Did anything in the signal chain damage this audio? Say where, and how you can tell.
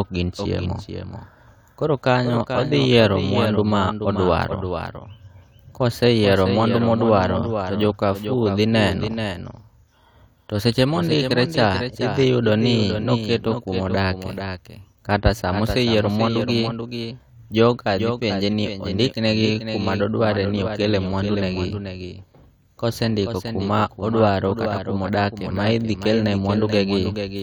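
Yes: throughout, the speech carries a full-band echo about 10 dB down, 400 ms late, a doubled audio track, likely from a slower capture path.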